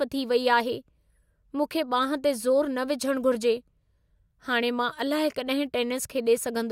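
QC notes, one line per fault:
Nothing to flag on this speech clip; no faults turned up anywhere in it.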